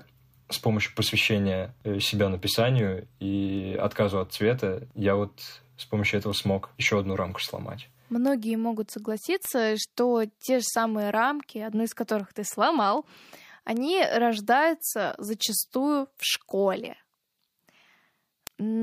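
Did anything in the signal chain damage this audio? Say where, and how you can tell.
Yes. The damage is at the digital interface between two devices, a word clock fault. Sharp ticks run through the speech from 0.43 s to 18.47 s. They come at a steady rate, about every 0.4 s, roughly fifty in all. The receiving device is running on its own clock, not locked to the sender. The clocks drift apart, at a rate in the region of 50 ppm. Each time they slip, one sample is dropped or repeated, and that makes each tick.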